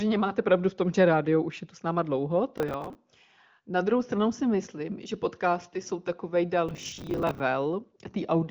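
Processor overload crackle hits this speech clip twice: from 2.58 to 2.95 s, right after "tu s náma dlouho", and from 6.69 to 7.4 s, right after "že podcasty jsou takový". Each burst is a run of missed audio deadlines, with each late buffer filled by a stale fragment of earlier audio whose hard edges sound like gritty tearing. The grain suggests buffers of about 10 ms, with a dozen or so misses in the first burst and several dozen in the longer second one. The narrow, wideband-telephone top end, with nothing above about 7.5 kHz, comes from the AMR-WB path.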